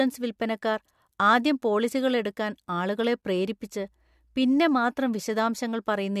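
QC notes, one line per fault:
No faults found.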